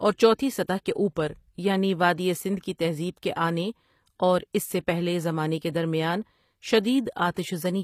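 Speech that was likely run through HE-AAC compression at a low bitrate, one that fits about 24 kbps. Only the lower spectrum is coded and the treble is rebuilt from copied lower bands, so s sounds turn gritty, metallic and lispy throughout.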